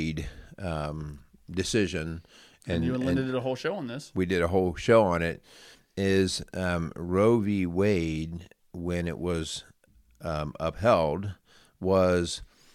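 Nothing goes wrong anywhere in this recording, as there's not a single technical fault to point to at any moment.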